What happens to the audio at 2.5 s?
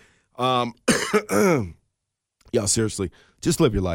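At 2.5 s the speech sits inside a run of word clock ticks lasting from 0.95 s to 3.52 s. The receiving device is running on its own clock, slipping against the sender's by something like 20 ppm. Each time the two clocks drift a full sample apart, one sample is dropped or repeated. The result is about three sharp, uneven ticks spaced roughly one and a half seconds apart, and this moment falls within that sequence.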